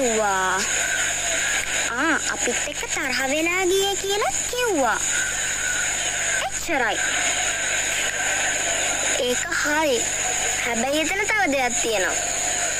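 From start to finish there's a mains buzz sitting under the sound, a steady raspy edge rather than a smooth hum. It's built on 50 Hz, and its harmonics run well up into the kilohertz range, which points to sharp switching spikes getting in, something like a dimmer, a rectifier or a missing shield letting them through twice per mains cycle. It sits roughly 20 dB below the signal the whole way.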